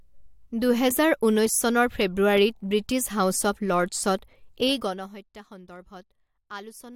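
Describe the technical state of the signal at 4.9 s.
At 4.9 s the speech carries zipper noise, running from 4.61 to 5.27 s. The level falls by roughly 20 dB in unsmoothed 1 dB steps, around fifty per second, and each step clicks, producing a rapid ticking that rides on the speech during the fade.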